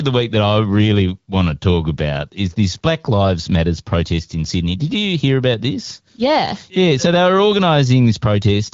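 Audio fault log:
No faults heard in this recording.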